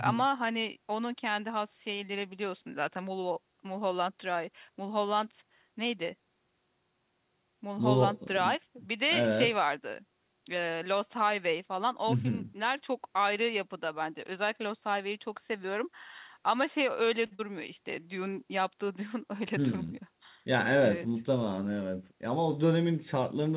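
At 17.26 s there is a short stall from a late packet, lasting until 17.33 s. The packet arrived late, and the jitter buffer ran dry. The receiver held the last sound for about 50 ms while it waited. Then playback picked up exactly where it stopped. Nothing is lost. The sound just hangs on too long, with a faint buzz or dip, and the audio now runs about 50 ms later.

Almost at once, from 17.35 s to 17.41 s, comes a short concealed packet loss. About 60 ms of audio never reached the decoder. The receiver covered the gap with roughly 38 ms of synthetic continuation, drawn from the pitch of voiced sound or shaped noise otherwise, then blended back. The result is a brief smear or wobble, and some sound drops out. Playback also catches up by a couple of hundredths of a second. All of this sits within narrowband audio, with nothing above 4 kHz, as the call codec passes it.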